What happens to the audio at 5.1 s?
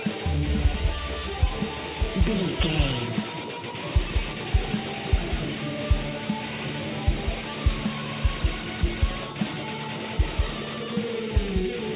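Nothing goes wrong at 5.1 s: the audio passes through intact there, carrying only the steady narrowband character of the G.711 call path, with nothing above 4 kHz.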